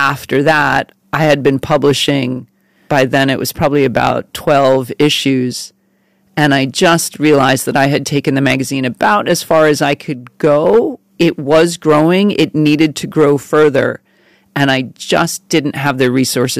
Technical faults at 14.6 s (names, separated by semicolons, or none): hard clipping